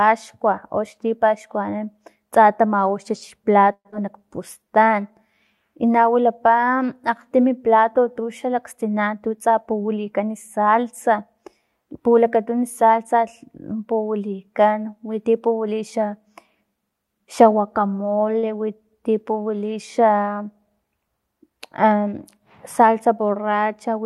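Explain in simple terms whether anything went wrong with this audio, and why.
At 3.73 to 3.94 s the speech breaks up. The last sound is stretched into a fading buzz, then there are about 60 ms of near-silence. Roughly 80 ms of speech never returns. This is likely a long network dropout, where the audio simply stopped arriving.

Right after, from 4.59 to 5.02 s, there is a jitter buffer slow-down. The player had to rebuild its reserve, so it repeated tiny slices of sound. Speech runs at 86% speed here, adding 68 ms, with drawn-out sounds but unchanged pitch.

There are two jitter buffer speed-ups. From 9.07 to 10.20 s the speech runs at 110% speed, trimming about a tenth of a second. From 21.43 to 21.85 s it runs at 107%, trimming a few hundredths. Too much audio had piled up, so small pieces were cut. Speech sounds slightly hurried.

At 18.39 s there is a short stall from a late packet. 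One piece of audio arrived late, so the player held the previous sound for 40 ms while it waited. Nothing is lost. You hear one sound lingering briefly, perhaps with a faint buzz.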